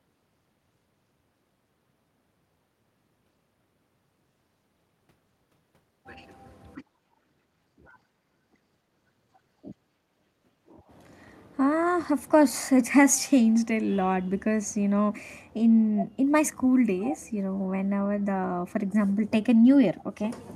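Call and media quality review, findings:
Echo leak: short delayed scraps of the speech at 15.98–16.05, 16.99–17.18 and 19.98–20.04 s, trailing by 265 ms. Fairly loud at first, barely there by the last one. Likely a far-end loudspeaker whose echo canceller let some pickup through.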